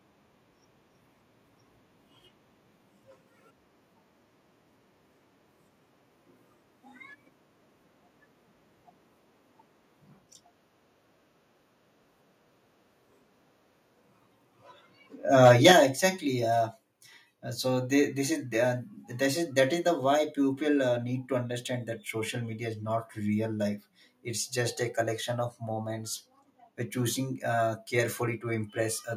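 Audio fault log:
15.43–15.72 s, microphone overload: The input stage was likely driven about 5 dB beyond what the converter can represent, so for this stretch of speech the loudest waveform peaks slam into the converter's limit and get sheared flat. Only a few percent of the samples are affected, but each flattened top adds a burst of harsh harmonics, giving these syllables a gritty, crackling edge instead of a clean crest.
15.72 s and 16.74 s, microphone volume stepped down: Right as the overload ends, the call software likely reacted to the clipped peaks by cutting the device's input volume, first by about 6 dB at 15.72 s and then by about another 2 dB at 16.74 s. Because each cut happens in a single step, voice and room background drop together abruptly rather than easing down, so the level sounds as if it lurches lower twice in quick succession.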